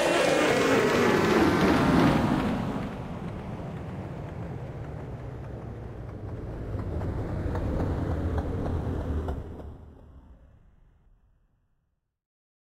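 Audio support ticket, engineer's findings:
Zipper noise, 9.22 to 9.90 s. Ticking rides on the sound during a downward fade of roughly 15 dB. Probable component: gain or volume stage with no smoothing. The level drops in 1 dB steps at around 20 steps per second, and each unsmoothed jump adds a small click.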